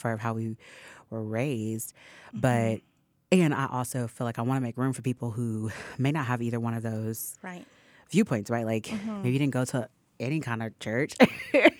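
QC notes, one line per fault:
No faults heard anywhere in this speech recording.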